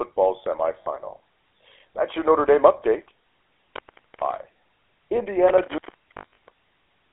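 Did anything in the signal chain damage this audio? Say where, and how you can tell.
Yes. The codec stage damaged the whole clip. It is GSM full-rate coding at 13 kbps, confined to a 300 to 3400 Hz line band. A plain band-limit would only sound muffled. This has the buzzy, gravelly roughness of a pulse-driven vocal-tract model.

Lost GSM frames happen at 0.82 to 0.87 s, about 40 ms, and at 6.18 to 6.35 s, where about 160 ms is lost in bursts, the longest run roughly 70 ms. These point to the radio or network path. The decoder holds the last sound with a metallic ring instead of going silent.

An intermittent contact in the analogue wiring opens during 3.01 to 4.62 s, for about 0.8 s in total, and again from 5.48 s to the end, for about 1.06 s. The signal drops with crackle at each break and leaves faint hiss while open. A frame loss would ring rather than crackle.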